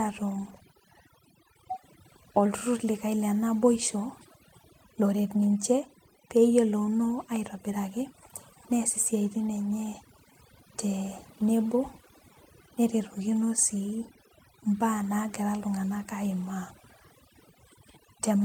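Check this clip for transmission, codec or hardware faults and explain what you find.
One fault runs through the whole clip: overdone noise removal. A noise reduction stage was set far too aggressively, so any frequency band sitting close to its noise estimate gets pulled right down or switched off, and the quieter parts of the speech fall below that line too. The result is a background that drops and breaks up into twinkling specks of leftover noise.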